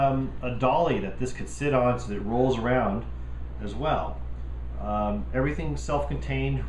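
Nothing here stands out as a technical fault; the audio just runs along steadily with no interruptions, glitches or dropouts to point at.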